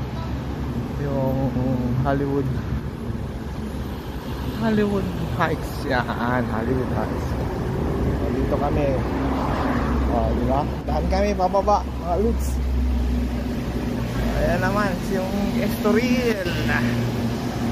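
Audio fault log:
10.81–10.88 s and 16.32–16.46 s, one channel drops out: likely a stereo channel briefly lost, so the mono-summed sound dips abruptly by about 6 dB, then recovers.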